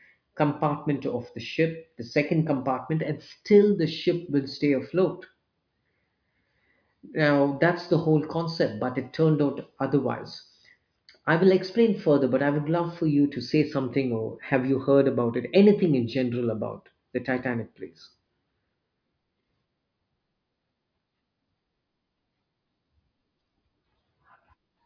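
No technical faults are audible.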